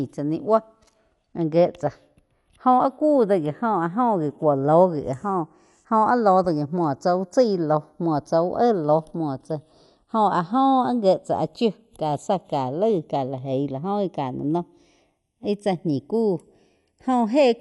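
From the start the two channels are drifting apart: they slide out of step at a clock error of around 20 ppm, reaching roughly 0.4 ms of offset by the end. Summed to mono, this gives a slow flanging on the speech. On a spectrogram, comb notches creep gradually downward through the spectrum.

Throughout the clip the speech is also dull and carries a rough, fluttering grain around voiced tones, likely from Dolby Digital compression, which fits a 64 kbps stream. A spectrogram shows a flat ceiling with nothing above 11.4 kHz, and blotchy, noisy patches between harmonics.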